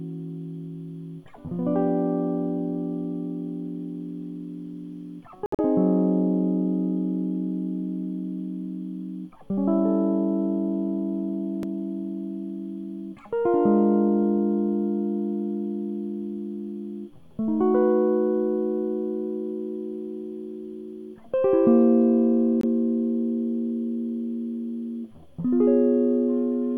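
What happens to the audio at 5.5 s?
The music drops out abruptly from 5.46 s to 5.60 s, a silent hole of about 0.14 s. This is a corrupt frame muted fault. Damaged bits in the compressed stream made the decoder reject a short run of frames. The gap's length points to roughly six frames. The player filled that span with silence instead of decoded sound. Playback resumes on time afterward, with no shift in timing.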